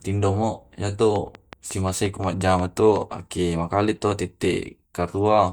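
From 1.16 to 2.97 s a train of clicks sits over the speech: about ten sharp, near-identical ticks at a steady 5.55 per second, peaking roughly 5 dB above the speech. Such regular pulses likely come from electrical interference or a faulty connection or power supply.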